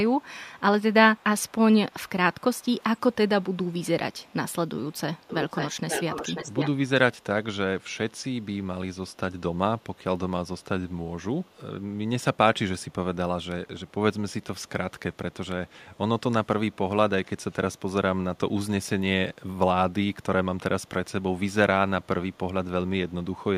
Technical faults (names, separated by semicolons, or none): echo leak